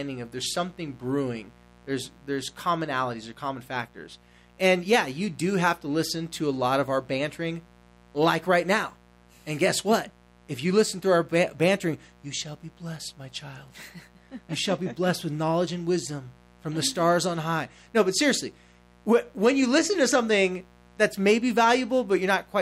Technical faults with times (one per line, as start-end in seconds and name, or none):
0.00-22.61 mains buzz